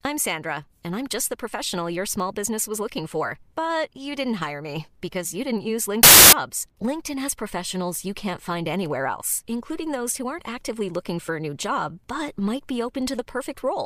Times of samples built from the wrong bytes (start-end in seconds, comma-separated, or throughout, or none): 6.03-6.33